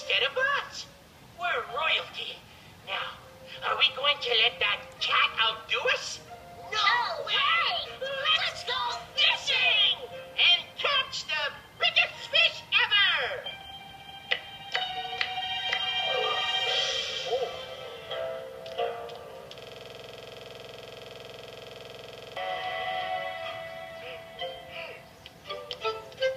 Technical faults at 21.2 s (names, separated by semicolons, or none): system hang loop